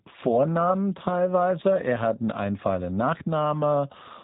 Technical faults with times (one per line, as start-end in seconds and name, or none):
0.00-4.24 G.729 codec